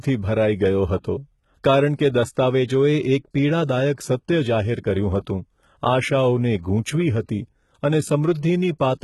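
Throughout, s sounds turn gritty and metallic, with nothing above 11.8 kHz. The likely cause is heavy HE-AAC compression faking the treble from copied lower bands.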